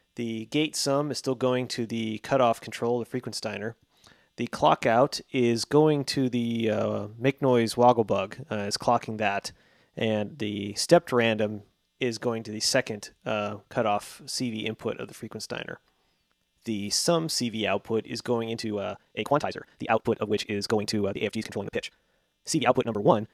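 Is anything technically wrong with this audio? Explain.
Yes. From 18.50 s to the end at 23.34 s there is a time-stretched section, likely from software compressing that stretch to fit a shorter length, running it about 1.91 times faster while holding pitch by discarding short slices of the waveform. The pace jumps abruptly at 18.50 s, and the remainder sounds rushed, yet the pitch stays exactly where it was.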